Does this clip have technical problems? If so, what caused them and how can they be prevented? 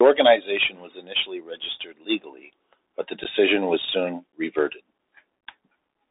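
Yes. The speech has been carried over a Bluetooth CVSD headset codec for its whole length. CVSD sends a single up-or-down bit per sample and adapts its step size, and the sound fits a 64 kbps CVSD link. The audio is confined to a narrow line band of roughly 300 Hz to 3.7 kHz. On a spectrogram everything above 3.7 kHz is empty. The codec damage is plainly audible: s sounds come out scratchy, loud bright passages distort where the step cannot keep up, and a granular hiss sits beneath the speech. Prevention: use a wideband headset profile such as mSBC or LC3, or a wired microphone.

There are also two instances of unconcealed Bluetooth headset packet loss. In each, about 11 ms of audio, likely a few voice packets, vanished and was replaced by silence or an idle pattern. The first falls between 3.24 and 3.26 s, right after "registered legally but the" and before "was soon reverted". The second is at 4.32 s, just after "was soon". 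Each gap has abrupt edges. A waveform would show a sudden flat notch, and a spectrogram a thin vertical blank stripe across all frequencies. Prevention: keep the headset close to the phone with a clear path and away from Wi-Fi congestion.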